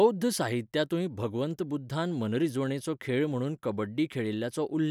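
A short bit of speech, and there's nothing technically wrong to point to anywhere in it.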